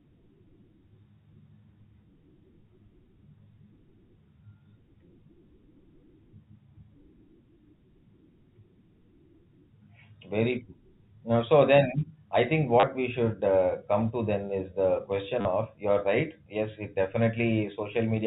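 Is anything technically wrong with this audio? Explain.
Yes. Two brief robotic stutters come from packet loss with last packet repeated: 30 ms at 12.8 s, between "I think" and "we should uh come", and 40 ms at 15.41 s, after "then is the question" and before "of you're right". The receiver replayed the last packet while waiting, with lengths that fit 10 ms packets. Those repeats ignore the pitch cycle, so each run buzzes near 100 Hz. The telephone band of the G.711 A-law coding stops at 4 kHz.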